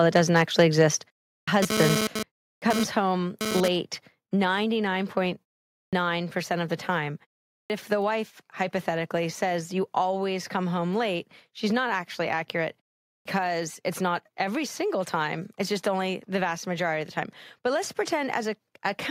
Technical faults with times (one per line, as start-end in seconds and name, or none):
0.15-0.82 microphone overload
1.02 microphone volume stepped down
1.39-1.48 clipped start after a pause
1.62-3.68 GSM phone buzz
2.07 microphone volume stepped down
2.54-2.62 clipped start after a pause
5.85-5.93 clipped start after a pause
7.61-7.70 clipped start after a pause
13.18-13.25 clipped start after a pause